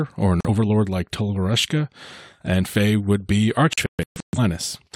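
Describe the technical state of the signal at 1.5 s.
At 1.5 s the speech signal is intact, with no dropout, distortion, glitch or other audible fault.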